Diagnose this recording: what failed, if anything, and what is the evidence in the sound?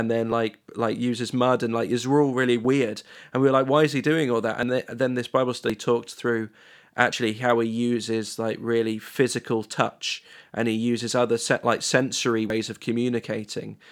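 The speech jumps at 0.32, 2.65 (just after "like is all really"), 4.63, 5.70 (just before "talked through"), 7.13, 9.73 (after "uses like really physical") and 12.50 s. Each time the sound skips ahead with no gap, losing roughly 20 ms, and about 70 ms at 12.50 s. This points to the driver or buffer stage, likely a dropped buffer (overrun) where the capture buffer was overwritten before it was read.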